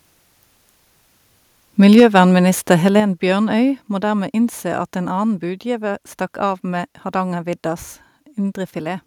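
Speech with two faults. From 1.97 to 2.2 s, microphone overload, likely from an input level set too high, drives the peaks about 5 dB past the converter's limit, flattening the tops of a few percent of samples into a harsh, crackling edge. Microphone volume stepped down twice, likely the call software cutting the device's input gain in response: at 2.0 s by about 3 dB, then at 3.0 s by about 6 dB, so voice and background drop abruptly each time.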